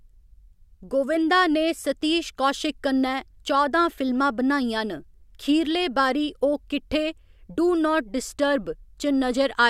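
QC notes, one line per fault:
No faults heard across the speech clip, nothing to flag.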